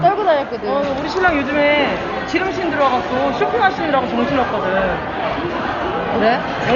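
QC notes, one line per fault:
Throughout: Dolby Digital compression, heavy, likely at a low bitrate around 40 kbps. Nothing is heard above 7 kHz, so the sound is dull, and many frequency lines get no real detail. The decoder fills them with noise, giving a rough, fluttering grain around tonal parts.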